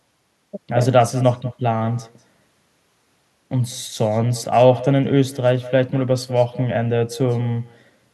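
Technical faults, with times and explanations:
Throughout, echo with no canceller: every phrase is trailed by a faint, thin copy arriving about a fifth of a second later, about 18 dB below the speech. The far end's loudspeaker feeds its microphone, and nothing removes that returned signal.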